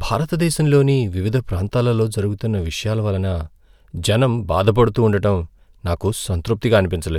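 Listening to this speech recording, nothing stood out as a technical problem.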